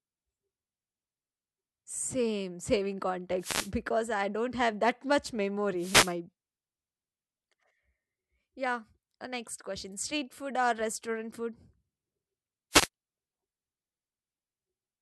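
Speech with three wireless microphone noise hits: brief swishes of static at 3.39–3.71 s before "because I don't have", 5.77–6.15 s after "don't have that much", and 12.71–12.88 s, as the analogue FM radio signal faded and receiver noise surged.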